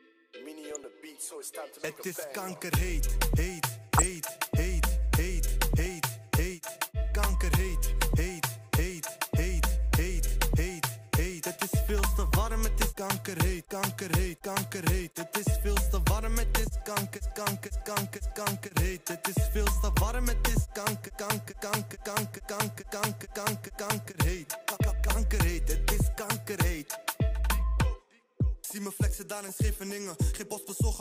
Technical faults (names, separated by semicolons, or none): DAB burbling